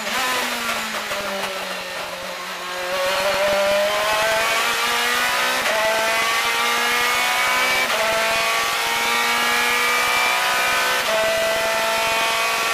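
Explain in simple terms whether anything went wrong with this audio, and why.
Buffer tearing runs through the whole clip, from start to finish. The program filling the playback buffer and the hardware reading it have fallen out of step, so in each pass the reader hits a small slice, roughly a fiftieth of the buffer, still holding audio from about a tenth of a second earlier. Those hard joins repeat 21.5 times a second, which fits a 2048-sample buffer, and add a steady robotic buzz whenever sound is playing.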